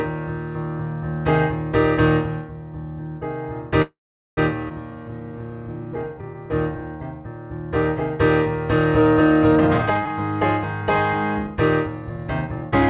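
From 3.82 to 4.39 s a call audio freeze fills 0.55 s: the last sound trails off, then about 0.43 s of silence follows, likely from stalled packets. Nothing goes missing, only delay is added.

At 4.69 to 4.72 s a skip ahead drops roughly 0.3 s. The two sides are joined almost directly, so audio is lost rather than paused.

From 4.91 to 6.82 s a jitter buffer slow-down plays at 87% speed. Repeated pitch periods add 255 ms, stretching sounds gradually at unchanged pitch instead of leaving one gap.

A jitter buffer speed-up from 9.53 to 10.10 s runs at 172%, removing roughly 0.4 s. A milder one from 11.47 to 12.71 s runs at 108%, removing about 0.1 s. Both sound hurried but keep the same pitch, with no single audible jump. Throughout, the band stops at 4 kHz, consistent with the G.711 call path.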